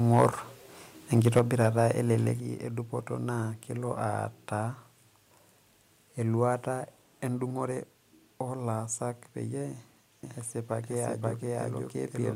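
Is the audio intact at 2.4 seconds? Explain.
No, at 2.4 s the level suddenly drops by about 5 dB, voice and background together, right before "edupoto naa kelo". It's a microphone volume step-down, likely the call software lowering the input gain.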